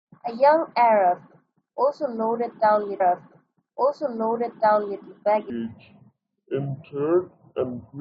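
Speech, with two faults. A stream segment is repeated from 3.00 to 5.00 s: about 2.0 s of audio plays again, with a small blip at the jump back, as if the player queued that segment twice. From 5.50 s to the end, the section is at the wrong speed, running at 0.61 times normal and dropping roughly ten semitones, so the speech turns deep and slow, likely from playback on a mismatched clock.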